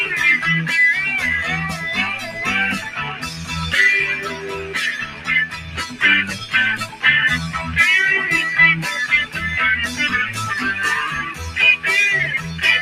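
A noise suppressor built for speech has been left on this non-speech audio throughout. It treats steady, sustained parts as noise and pulls them down, so the level pumps and thins by around 10 dB. Sound cut by the noise suppressor is clearest at 2.18–2.38 s, 2.79–3.52 s, 4.17–4.76 s, 5.03–5.29 s, 5.47–6.00 s and 6.83–7.04 s. Held sounds and decays sink there by about 6 to 10 dB. Sharp onsets mostly survive.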